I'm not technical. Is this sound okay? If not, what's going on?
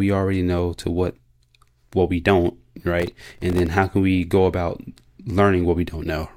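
No. From 3.00 to 3.66 s, after "what we don't", there's processor overload crackle: the computer repeatedly missed tiny audio deadlines. Unlike one clean dropout, it's a gritty burst of dozens of tiny silent gaps that stops before "how can we go".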